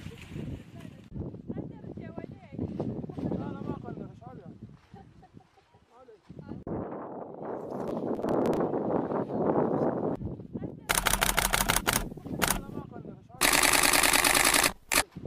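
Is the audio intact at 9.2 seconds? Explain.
Yes, the audio at 9.2 seconds is intact, with no dropout, click, distortion or other fault at that moment.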